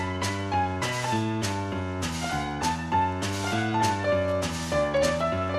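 The whole clip sounds dull and clearly gurgly, with a grainy, watery edge where the top end keeps dropping in and out. That's most likely MP2 compression, where starved sub-bands get switched off and the rest coarsely quantised, and the damage fits a rate around 80 kbps. From about 2.13 s to the end there's Wi-Fi interference on top: a steady tick close to ten times a second, a beacon every 102.4 ms being rectified by the audio circuit, sitting roughly 30 dB below the sound itself.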